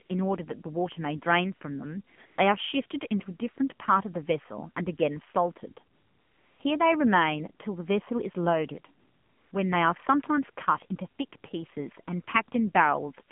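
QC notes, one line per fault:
Throughout: AMR narrowband mobile codec. The speech has passed through an AMR-NB coder at 8 kHz-sampled narrowband, with a rate that points to the 7.4 kbps mode, and the line keeps only about 150 Hz to 3.4 kHz. Everything above that is gone, so sibilants lose their edge and the voice sounds thin and boxed in. At this low rate the pulse-driven vocal-tract model is plainly audible as a buzzy, synthetic timbre. That buzz on voiced sounds is what separates codec damage from a plain band-limiting filter.
0.06 to 0.10, 2.16 to 2.18, 2.26 to 2.38, 5.94 to 6.60 and 9.00 to 9.52 s: AMR comfort noise. In each of these stretches the sender judged the talker silent and stopped sending speech frames, for 40, 20, 120, 660 and 520 ms respectively, and the receiver filled the gap with generated noise built from a rough level and spectrum estimate. The real background gives way to a smooth, steady hiss that switches in and out at the gap edges. 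That substituted noise, rather than silence, sets this apart from a noise gate or noise suppression.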